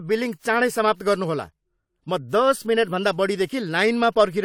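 Throughout the speech, the top end stops abruptly at about 19.8 kHz, and the detail beneath carries two different kinds of coding texture at once, a layered texture rather than one consistent artefact. This is likely transcoding between lossy codecs: the audio was encoded once, then encoded again, so the second codec spent bits copying the first one's artefacts and added its own. The character fits a WMA stage near 96 kbit/s followed by AAC-LC near 64 kbit/s.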